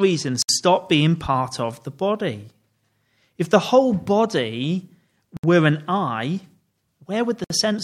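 Speech with gaps at joins of encoded pieces at 0.42, 5.37 and 7.44 s: 60 to 67 ms of silence from untrimmed encoder delay and end padding. Unlike a dropout, nothing is lost, and the sound resumes exactly where it stopped.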